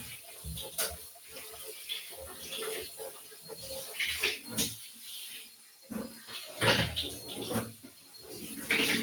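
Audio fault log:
Throughout: noise suppressor applied to music or sounds. A speech-tuned suppressor is running across the whole clip and treats the steadier parts of the sound as noise, so the level keeps being pulled down and let back up, swinging by something like 10 dB. Sharp onsets get through fairly intact, but anything held or decaying gets squeezed. That leaves the audio pumping and thinning, with tails that seem to vanish instead of ringing out.
0.19–0.44 s, 1.02–1.35 s, 3.12–3.47 s, 4.9–5.05 s, 5.47–5.9 s, 7.76–8.22 s: sound cut by the noise suppressor. In each of these spots the suppressor decided the sound was noise and ducked it harder than the surrounding material, by about 5 to 7 dB at the deepest, with the last two the strongest. Each dip lasts between about 0.15 and 0.5 s. You hear the body or decay of the sound sag and cut short, while any sudden edge still pokes through.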